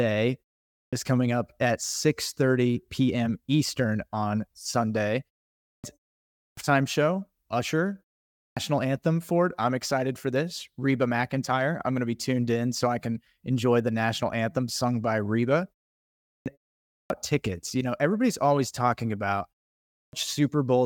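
Seven times in this speech the output clips the start after a pause: at 0.69, 5.6, 6.33, 8.33, 16.19, 16.83 and 19.85 s. Each follows a gap of only 0.33 to 0.53 s, just long enough for the device to drop off, and it then eats roughly 0.24 to 0.28 s while waking, so "is coming up at" and "anthem for it I'm" jump in abruptly, and the phrase after "everybody's always talking about" loses its opening sounds too.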